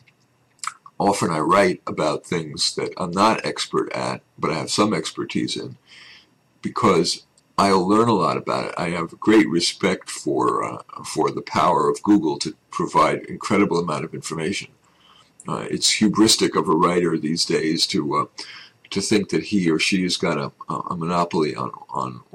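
Hard clipping runs through the whole clip: the signal is driven about 9 dB past what a stage in the chain could pass, so its peaks are sheared flat. Under one percent of samples hit that ceiling, yet each flattened top adds high harmonics, heard as crackle and harshness on the loudest moments.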